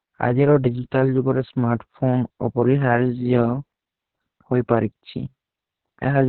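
Throughout, the speech has passed through Opus voice compression, its SILK coder held to narrowband and starved of bits, which fits a bitrate around 6 kbps. Nothing survives above 4.3 kHz, so the voice sounds muffled, and coarse excitation coding leaves it hoarse and slightly robotic.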